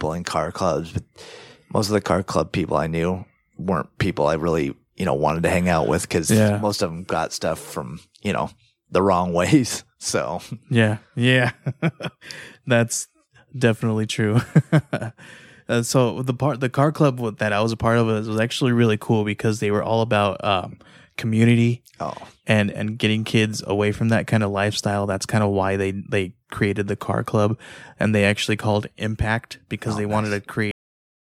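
Cut-off end at 30.71 s: the speech stops abruptly in the middle of a sound and drops straight to digital silence, which holds for the remaining 0.6 s or so. There is no natural decay or fade, because the final stretch of audio was never written out or played back. The recording simply ends where the last delivered buffer finished, leaving the sound truncated rather than completed.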